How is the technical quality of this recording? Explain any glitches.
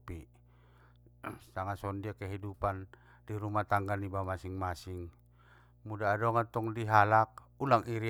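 The recording carries mains hum for its entire length, sitting under the speech from start to finish. The hum is a steady low tone at 60 Hz, roughly 30 dB below the speech level. It comes from the power line leaking into the signal path, through a ground loop between connected equipment or through magnetic coupling from a nearby transformer. It is heard as a constant drone beneath the speech.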